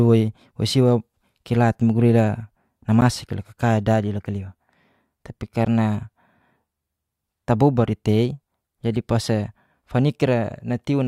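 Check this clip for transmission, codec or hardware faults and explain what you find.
Two blocks of digital silence occur, at 3.01 s and 5.65 s, each 10 ms long. The output buffer was likely not filled in time, so zeros replaced the sound. Each abrupt cut and return without a fade produces a brief tick in the speech.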